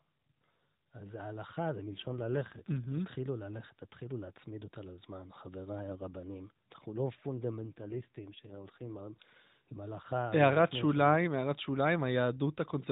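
At 1.87–2.93 s and again at 7.63–9.01 s the speech turns rougher and buzzier, an AMR rate drop consistent with 12.2 falling to 5.9 kbps. The spectrogram keeps its 4 kHz ceiling with no gap, but harmonics smear and the waveform loses fine detail.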